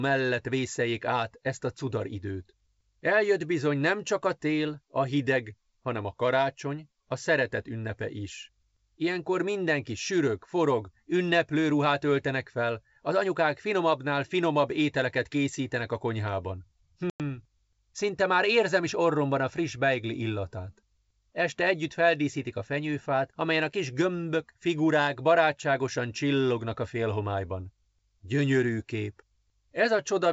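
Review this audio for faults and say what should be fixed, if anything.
At 17.10 s, right after "ételeket készítenek a konyhában", there is packet loss on an ADPCM call: about 100 ms of audio, roughly ten packets, drops to hard-edged silence until 17.21 s. Unlike a simple dropout, the speech does not resume cleanly. Because the missing data left the receiver's adaptive predictor and step size out of step with the sender's, the sound comes back slightly distorted, then settles over the next few tens of milliseconds. The rest of the wideband G.722 path at 64 kbit/s carries the speech clearly up to 7 kHz. To prevent this, add packet-loss concealment that also resets or resynchronises the ADPCM decoder state after a gap, and reduce loss with jitter buffering or redundancy.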